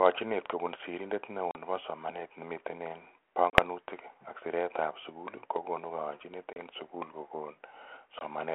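Four hard-edged holes break the speech, each followed by a slightly distorted re-entry that settles within tens of milliseconds: 1.51 to 1.56 s (between "kobun sirender neo" and "nebo somanet ne"), 3.50 to 3.60 s, 6.53 to 6.61 s (after "sugul kokunu kayanchinet", before "sukul kokun"), and 8.19 to 8.24 s. This is packet loss on an ADPCM call over 32 kbit/s G.726. A few packets, 20 to 40 ms of audio, were replaced by silence, leaving the decoder's predictor and step size out of step with the sender's until they realigned.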